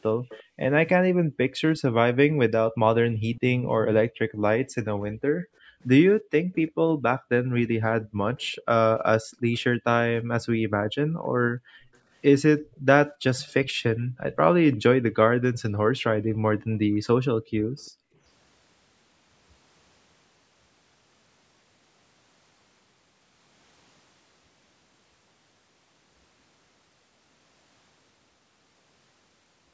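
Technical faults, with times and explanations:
0.29–9.59 s, 11.95–14.76 s and 17.78 s, echo leak: a faint delayed copy of the speech trails it by 346 ms, roughly 20 dB below the voice and much fainter at 17.78 s. The likely cause is a loudspeaker on the far side whose echo canceller let part of the playback back into its microphone.
0.43–1.6 s, 4.08–14.2 s and 15.79–18.18 s, background gated by the echo canceller: the room sound drops away by up to about 37 dB (about 35 dB in the last stretch), totalling roughly half a second, about three seconds and about a second. The canceller clamped the microphone while its loudspeaker played, then released it.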